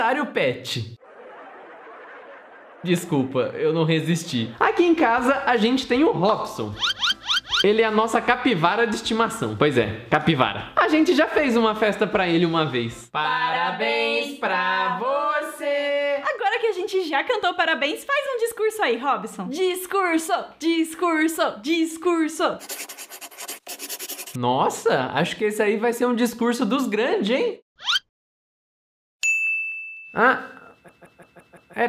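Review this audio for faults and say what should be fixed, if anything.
A system hang loop runs from 30.89 to 31.74 s: one 170.67 ms piece of sound repeats exactly five times at 5.86 Hz, a machine-gun stutter that fits an 8192-sample ring buffer replayed while the driver froze. Unlike an underrun dropout, there are no silent gaps, only identical repeats. Keeping the audio thread at real-time priority and adding a watchdog that mutes output when the buffer stops refreshing would prevent it.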